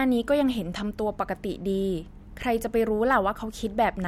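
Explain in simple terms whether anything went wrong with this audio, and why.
Nothing went wrong here; the speech comes through steadily, with no dropouts, glitches or other problems to point to at any moment.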